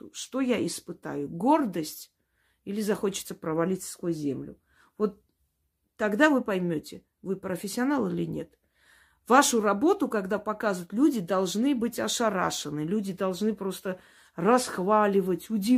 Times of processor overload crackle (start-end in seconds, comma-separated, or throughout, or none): none